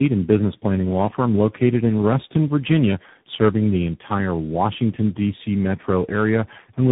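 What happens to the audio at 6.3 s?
At 6.3 s you're hearing tandem speech coding, which runs through the whole clip: the speech sounds like it went through about three coders in a row, each re-encoding the last one's damage. It comes out rough, muffled and warbly, with nothing above 3.8 kHz.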